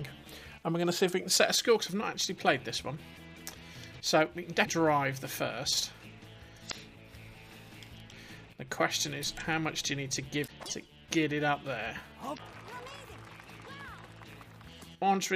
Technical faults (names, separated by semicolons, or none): damaged data in a compressed stream